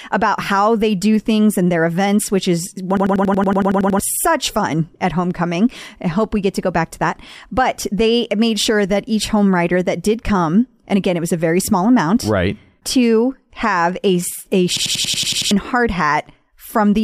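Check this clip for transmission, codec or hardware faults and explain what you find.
There are two system hang loops in this speech. At 2.97 s, right after "events which is one", a 93 ms chunk repeats 11 times until 3.99 s, when it picks up at "such fun at homecoming". At 14.77 s, after "to have a a", the same thing happens, running 8 times to 15.51 s. Each time, the driver stalled while the hardware kept replaying its ring buffer, which fits a 4096-sample buffer. You hear a machine-gun stutter at about 10.8 Hz, and roughly a second, then about 0.7 s, of audio is lost.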